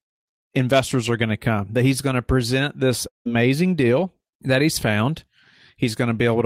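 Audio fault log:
3.07 to 3.27 s, long network dropout: Right after "going to present this", the last sound smears into a buzzy tail that fades away. Then about 150 ms of silence follows. Speech returns at "deal that he's found" with roughly 180 ms of audio gone. The likely cause is a stall in the incoming stream. The receiver stretches the final sound to cover the hole, then gives up and goes quiet until data arrives again.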